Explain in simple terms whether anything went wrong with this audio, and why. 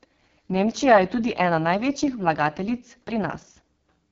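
Something did go wrong. The whole recording, from start to finish, has passed through the AMR wideband (HD Voice) codec, the compression used for high-definition phone calls, at one of its lowest settings. Squeezed that hard, the speech turns rough and raspy throughout, and nothing is left above about 7 kHz. Unlike an ordinary narrowband phone line, which sounds thin and boxy, this keeps a fuller, brighter tone, but with a gritty, buzzy texture.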